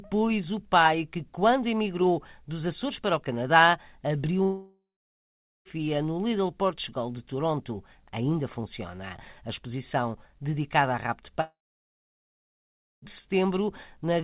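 Long network dropouts at 4.43–5.68 s and 11.41–13.05 s: the likely cause is audio stopped arriving, so the receiver stretched the last sound into a fading buzz, then silence (about 0.8 s, then 1.5 s), before resuming with roughly 1.2 s and 1.6 s missing. The band stays capped at 4 kHz throughout, which fits a 64 kbps G.711 A-law call path.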